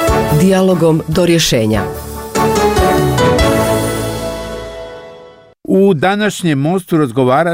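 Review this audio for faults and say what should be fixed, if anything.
Nothing needs fixing, as no technical faults can be heard anywhere in the recording.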